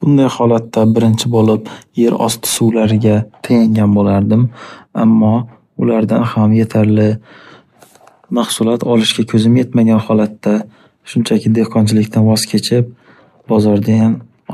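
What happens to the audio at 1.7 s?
At 1.7 s the speech is inside a stretch of crude rate conversion that runs from 0.64 to 2.71 s. The sample rate was changed by simply picking the nearest existing sample, with no filtering. The sound points to a conversion from 48 kHz to 44.1 kHz. Samples are dropped in a fixed, repeating pattern, which adds tones unrelated to the voice. The result is a gritty, inharmonic fizz sitting roughly 25 dB below the speech.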